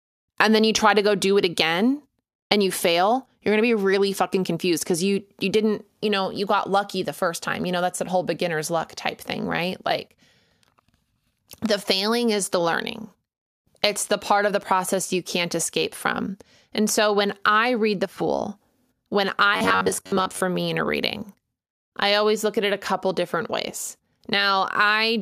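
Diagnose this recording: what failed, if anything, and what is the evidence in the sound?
Driver or buffer stage: from 19.54 to 20.41 s, before "me in a reading", speech becomes robotic sound from repeated short buffers, a metallic buzz at 93.8 Hz. Likely an underrun looping 10.7 ms segments over about half the span. Spectrogram: evenly spaced harmonic lines. Waveform: identical repeating cycles.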